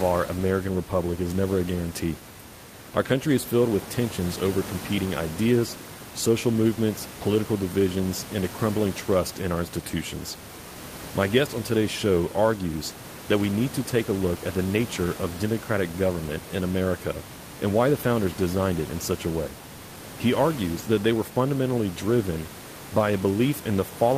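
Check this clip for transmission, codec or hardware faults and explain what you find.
I checked this clip and found no faults to explain.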